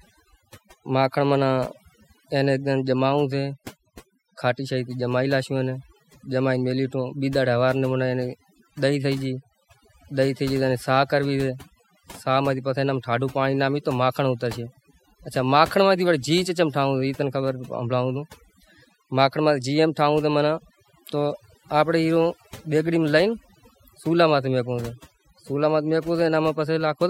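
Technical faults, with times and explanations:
Throughout: overdone noise removal. An over-aggressive noise reducer mutes bands near its noise estimate, leaving a lowered background that breaks up into twinkling specks.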